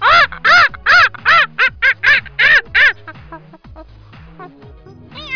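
No dropouts, clicks, distortion or level problems turn up anywhere in the clip.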